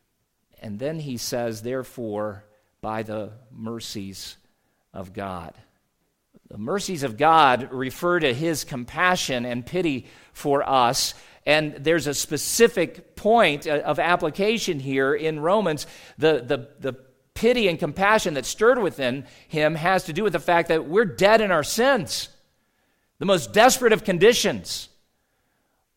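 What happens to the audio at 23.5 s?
At 23.5 s the speech carries on cleanly, with no dropout, click, distortion or other audible fault at that moment.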